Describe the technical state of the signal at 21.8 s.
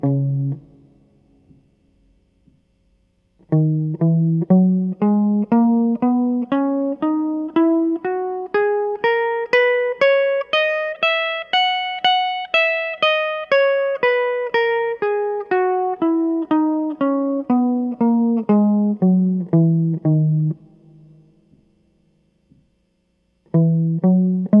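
At 21.8 s the music plays through intact, with no dropout, distortion or other fault in the signal at that moment.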